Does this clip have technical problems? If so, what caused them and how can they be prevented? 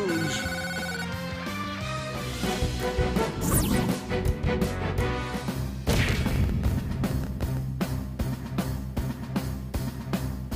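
Yes: a train of clicks runs from 6.29 to 7.58 s, about a dozen sharp pulses per second at an irregular pace, each standing out several decibels above the sound, likely from electrical interference or a faulty connection or power supply. Unlike random crackle, the clicks share one shape. Keeping equipment away from noisy devices and using a stable, well-powered interface prevents this.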